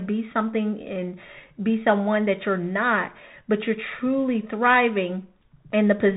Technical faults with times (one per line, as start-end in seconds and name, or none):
0.00-6.16 Bluetooth CVSD headset codec